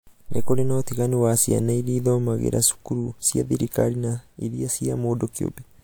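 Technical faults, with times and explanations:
No technical faults can be heard in this recording.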